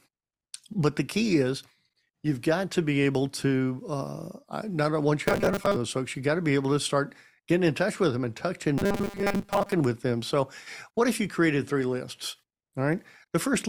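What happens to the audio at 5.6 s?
From 5.26 to 5.76 s, between "to uh not once" and "folks you got to", robotic sound from repeated short buffers turns speech into a rigid 200 Hz buzz. The likely cause is 5 ms blocks repeated for about half the span. A spectrogram shows flat 200 Hz-spaced harmonic stripes, and the waveform shows identical 5 ms cycles.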